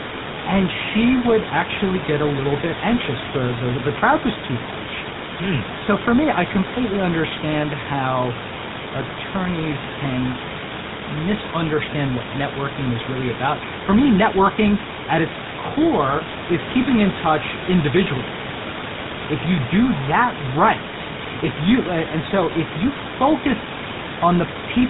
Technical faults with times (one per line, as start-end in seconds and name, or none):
0.00-24.89 GSM full-rate codec